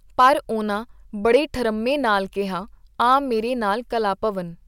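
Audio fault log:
0.20 to 0.28 s and 1.34 s, hard clipping. Peaks overdrive a stage by about 3 dB, then about 2 dB, so their tops are sliced flat. The flattened waveform adds high harmonics, heard as brief crackle, the second just before "ਠਰੰਮੇ ਨਾਲ ਕੀਹਾ".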